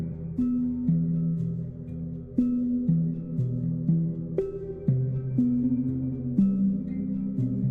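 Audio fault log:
Nothing to log here: the music runs along without a single audible glitch anywhere in the clip.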